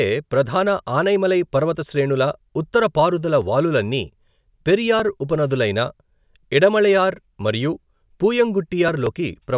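No technical faults are audible.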